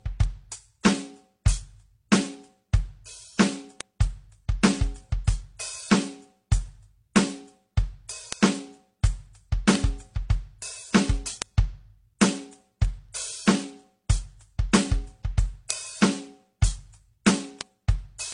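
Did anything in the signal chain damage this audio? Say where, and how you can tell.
Yes, at the codec stage: transcoding between lossy codecs, likely AAC then MP3 then HE-AAC, leaves nothing above 10.1 kHz and layers mismatched artefacts throughout the music.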